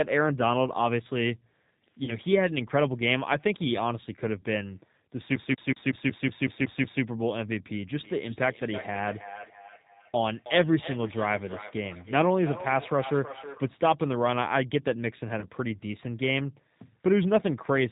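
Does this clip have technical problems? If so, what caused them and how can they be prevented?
Yes. The G.729 codec runs throughout: speech rebuilt from a vocal tract model and a few pulses at 8 kbit/s sounds rough, synthetic and cut off above 4 kHz. Use a wideband codec such as Opus or G.722 where bandwidth allows.

VoIP packet loss concealed by the speech codec occurs at 2.04 to 2.13 s, where 40 ms went missing, and at 15.40 to 15.46 s, where 20 ms went missing. Each time the decoder stretches the last frame into a fading buzz or coloured noise, and the sound stays weak just afterwards. A jitter buffer, a steadier network path or forward error correction would reduce these gaps.

Feedback echo between two devices runs from 7.99 to 13.68 s. Speech comes back roughly every third of a second at up to about 13 dB below the original, getting thinner and more ringing with each pass. Muting the microphone and speaker on one of the devices in the shared room prevents the loop.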